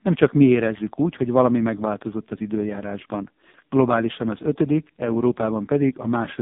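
Throughout, the speech carries AMR narrowband mobile codec damage. Nothing passes above 3.7 kHz or below 150 Hz, and the heavy, buzzy, synthetic quality points to AMR-NB's lowest mode, around 4.75 kbps. Unlike a plain telephone band filter, the voice sounds rebuilt rather than merely muffled.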